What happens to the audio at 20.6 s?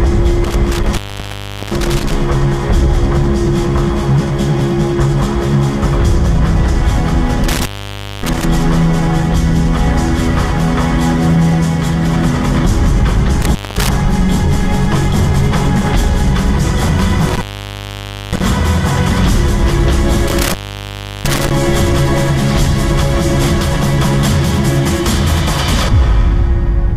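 At 20.6 s the audio drops out from an intermittent contact between 20.28 and 21.51 s, a loose connection opening for about 708 ms. The sound cuts to faint hiss, with crackle at the break and reconnection. The waveform shows a flattened gap framed by sharp spikes, and the spectrogram shows broadband vertical streaks around a near-empty band.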